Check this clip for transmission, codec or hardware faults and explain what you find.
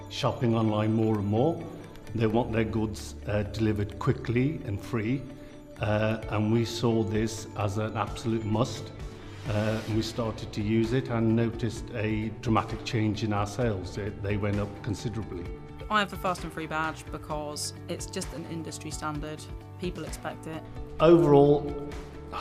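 Nothing stood out on listening to this clip.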